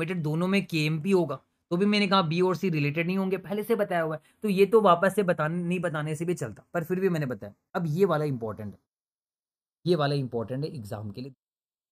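Channels drifting apart throughout: clocks roughly 20 ppm apart let the delay between channels creep toward a third of a millisecond, so mono comb notches sweep slowly, unlike a fixed offset's static colouring.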